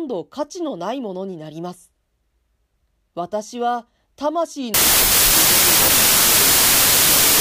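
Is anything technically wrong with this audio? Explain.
Yes. There is a wrong sample width fault from 4.74 s to the end at 7.40 s. Packed 24-bit samples are being read as 16-bit integers, so each 16-bit value is built from mismatched bytes and only some keep the true signal's upper bits. Loud, harsh noise swamps the speech, which survives only as a buried trace. Every three bytes yield one and a half samples, so it plays at about 0.667 speed and correspondingly lower pitch.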